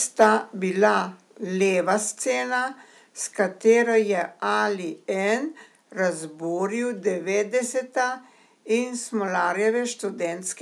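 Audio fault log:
0.21–0.27 s, microphone overload: a brief, harsh crackle sits on the loudest moment of speech, with its peaks flattened. The likely cause is input gain set about 3 dB too high, so roughly one sample in twenty hit the converter's ceiling and was cut off.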